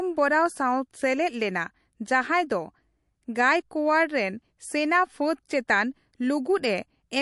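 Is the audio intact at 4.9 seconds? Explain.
No. At 4.9 seconds, as throughout the clip, the speech carries damage from likely MP3 compression at a low bitrate, which fits roughly 48 kbps. Starved of bits, the encoder cut everything above 11.3 kHz and zeroed weaker frequency lines, letting them flicker on and off between frames. The result is plainly audible: dull, band-limited speech with a watery, swirling texture, metallic chirps on s sounds, and smeared attacks.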